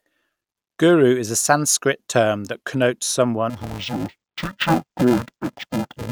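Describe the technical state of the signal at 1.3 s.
At 1.3 s the speech signal is intact, with no technical fault to be heard at that moment.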